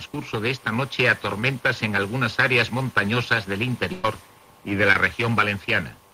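At 1.40 to 1.42 s there is a short concealed packet loss: about 10 ms of audio never arrived, and the decoder bridged the hole by extending the preceding sound before blending back into the real signal. It is heard as a tiny smear or wobble. On a spectrogram the harmonics or noise texture run on briefly unchanged, and in the waveform a few repeated cycles replace the true detail. A second, slightly longer one follows at 4.93 to 4.96 s, where about 20 ms went missing and the same smeared bridge appears.

Between 3.92 and 4.05 s a burst of packet loss removes about 110 ms. The receiver kept continuing the last sound and letting it decay, so the sound turns into a held buzz or fading hiss and then jumps ahead, with the intervening material gone. A spectrogram shows a frozen, gradually dimming band with no new onsets; the waveform envelope tapers smoothly, then restarts abruptly.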